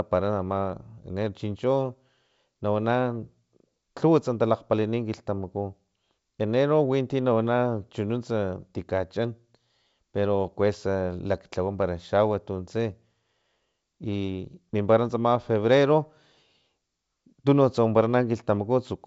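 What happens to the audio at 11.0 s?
At 11.0 s the speech comes through intact, with nothing going wrong at that moment in its G.722 wideband telephone coding.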